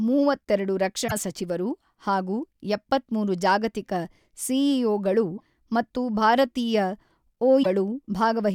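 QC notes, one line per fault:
1.05–1.12 s, 5.34–5.41 s, 7.60–7.66 s: damaged data in a compressed stream. Each 60–80 ms span is where the decoder misreads corrupted frames and loses sync. This differs from a clean dropout, which would leave silence or a smoothed gap.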